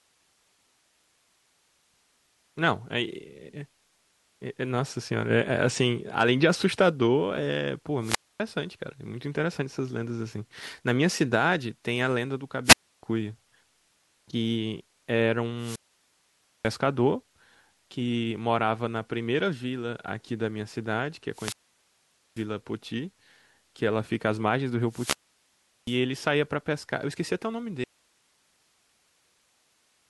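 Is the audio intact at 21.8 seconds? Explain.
No. From 21.31 to 22.46 s a brief rise of static opens a 0.84 s near-silent hole: a wireless microphone squelch dropout, where the fading radio signal triggered the receiver's muting.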